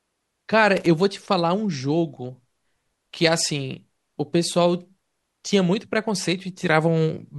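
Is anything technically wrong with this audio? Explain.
Yes. From 0.77 to 0.86 s the speech breaks into a short, irregular burst of scratchy crackle. This is loose connector crackle: a worn or dirty contact briefly makes and breaks, chopping the signal, and any DC on the line turns each break into a pop.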